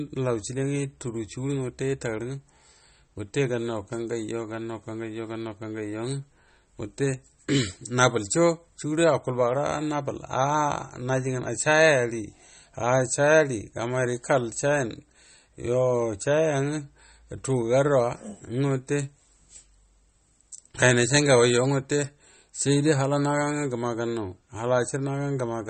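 From start to end, the speech carries MP3 compression damage, likely from a low bitrate around 32 kbps. Nothing sounds above 8.4 kHz, so the treble is dull. Short of bits, the encoder drops weak detail. The speech sounds watery and swirly, with smeared attacks.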